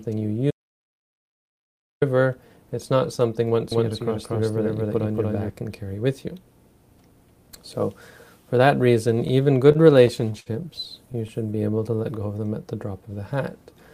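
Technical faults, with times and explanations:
0.51–2.02 s: audio dropout to silence. About 1.5 s of the sound vanishes into silence, with no room tone underneath, then resumes mid-flow. The input was likely lost, through a disconnected device or failed link, while the recorder kept writing silence; that content is gone.
3.72–5.50 s: doubled audio track. A second, full-band copy of the sound runs roughly 0.2 s behind the original at about the same level, with no decay or room colouring, and it starts and stops abruptly. This likely comes from a slower duplicate capture path or misaligned edit.
9.72–10.48 s: repeated stalls (stutter). Six brief holds, the longest 60 ms, together 119 ms, about 16% of the span, make the sound drag and stutter. Late packets repeatedly emptied the jitter buffer, and the receiver extended the last sound each time, losing nothing.
11.12 s: short stall from a late packet. 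A 16 ms hold stretches the current sound slightly too long before it carries on from the same point. A packet missed its slot, the jitter buffer briefly ran dry, and the receiver filled until it arrived.
11.47–11.98 s: jitter buffer slow-down. About 65 ms is added over half a second, so the sound plays at roughly 89% speed with unchanged pitch and slightly drawn-out texture. The receiver repeated pitch periods or pause fragments to rebuild its buffer reserve.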